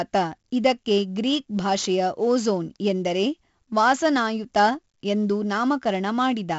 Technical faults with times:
0.00-6.59 4-bit ADPCM compression

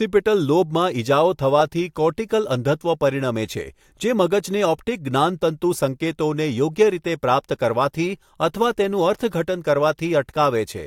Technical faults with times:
none

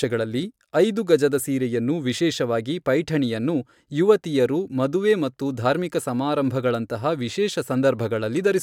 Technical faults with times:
none

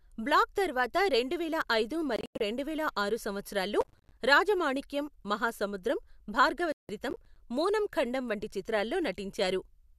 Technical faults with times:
2.16-2.41 digital broadcast dropout
3.81-4.17 processor overload crackle
6.72-6.90 digital broadcast dropout
7.10-7.36 processor overload crackle

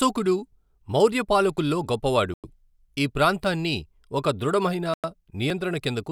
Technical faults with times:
2.34-2.44 gap between chunks
4.94-5.04 gap between chunks

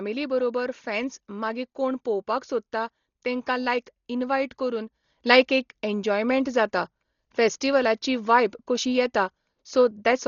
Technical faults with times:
0.00-10.28 Dolby Digital compression
5.04-10.28 sudden gain jump

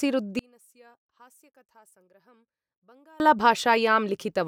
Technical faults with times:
0.39-3.20 one channel inverted

